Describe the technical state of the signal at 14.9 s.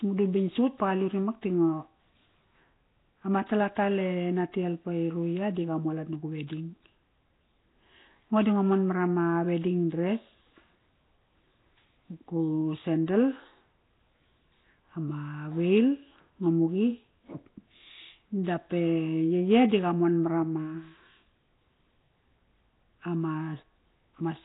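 At 14.9 s the speech carries the same damage heard across the whole recording: heavy Nellymoser compression, likely from Flash's Nellymoser Asao codec at a rate around 16 kbps. Each short block gets a fixed, tiny bit budget, so weak bands are swapped for noise, giving a rough, hissy halo and a smeared, underwater tone. A spectrogram shows a hard ceiling at 3.8 kHz with blotchy, noise-filled patches below it.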